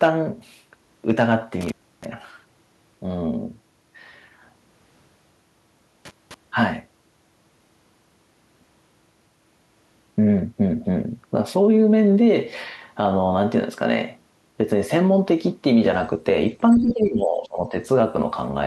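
At 1.61 to 2.05 s and again at 6.05 to 6.34 s, the speech cuts out with crackle at both edges, a sign of intermittent contact in a loose cable or plug. The line stays open for about 310 ms and then about 220 ms, leaving only faint hiss. A waveform shows near-flat gaps framed by sharp spikes, and a spectrogram shows broadband clicks around dark bands.

From 16.70 to 16.93 s, a faint second voice comes through about 20 dB below the speech. This is the other side's voice leaking through, likely loudspeaker playback that the echo canceller did not fully remove. A spectrogram shows a weak, separate harmonic pattern layered under the main speech.

Overlapping that, from 16.77 to 17.75 s, the speech is pulled down by roughly 15 dB at its deepest. This is speech suppressed in double talk: with both sides active, the canceller likely attenuated everything. The waveform shows a dip in the envelope lasting about a second.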